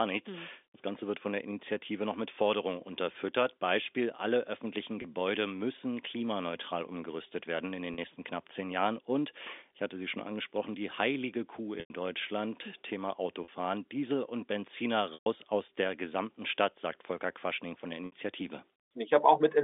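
Packet loss with pitch repetition occurs at 5.02, 7.94, 11.8, 13.44, 15.14 and 18.06 s. The gaps run 20 to 120 ms, consistent with 20 ms packets. The receiver loops the last pitch period, so short gaps sound held and buzzy, while the 100 and 120 ms gaps fade toward silence.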